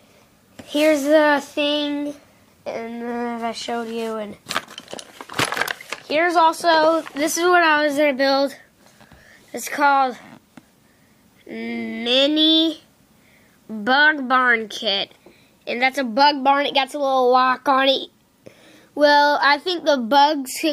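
No technical faults can be heard anywhere in the recording, and the signal holds steady throughout.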